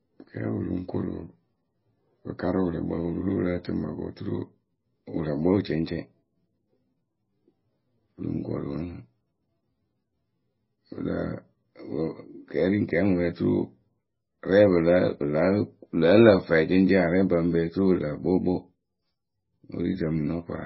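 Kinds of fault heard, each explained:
MP3 compression: The speech has nothing above 5.6 kHz, a hard treble cut-off. Weak frequency lines switch on and off between frames. This sounds watery and swirly, with metallic chirps on s sounds. The heavy damage likely points to MP3 near 15 kbps.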